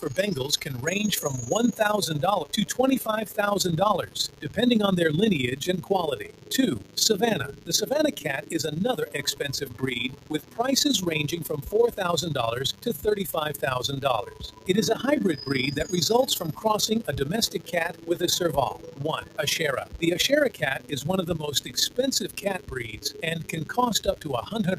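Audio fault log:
Throughout: DECT cordless phone buzz. A thin, steady buzz sits around 20 dB below the sound. A nearby DECT handset or base sends a radio burst every 10 ms, and the audio circuitry rectifies it, giving a 100 Hz tone dense with harmonics.
Throughout: noise suppressor applied to music or sounds. A speech-tuned suppressor was left running. It treats sustained tones, ambience and reverb as noise and turns them down, so the level pumps and thins, with gain swinging by about 15 dB while attacks pass largely intact.
Throughout: overlap-add ripple. The audio flutters with a rough tremolo about 11 dB deep, at around 20 Hz. The processing split the signal into windowed frames and rejoined them with an overlap whose gains don't sum evenly, so the level dips and recovers once per frame.
4.06–4.52 s, 5.83–10.58 s, 11.43–11.98 s, 12.73–13.63 s, 14.24–14.68 s, 17.53–18.08 s, 18.73–20.92 s, 21.59–24.53 s: sound cut by the noise suppressor. 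In each span the suppressor mistook held or decaying sound for noise and pulled it down by up to about 13 dB (about 10 dB at 11.43 s). Tails shorten and sustained parts sink while sharp onsets survive. The longest stretches lose the most, from about one to two seconds each.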